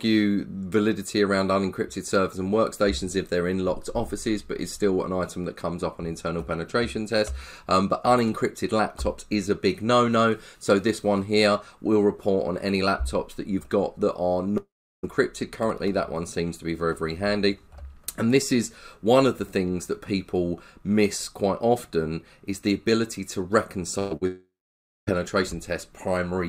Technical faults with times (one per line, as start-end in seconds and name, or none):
14.57-15.05 long network dropout
23.99-24.23 burst of packet loss
24.27-25.09 long network dropout